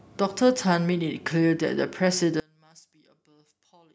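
From 2.4 s to the end, the speech falls by about 31 dB without going fully silent, which points to one channel inverted, likely cancelling the shared centre content when summed to mono. A dropout or mute would cut to silence; here a faint residue stays.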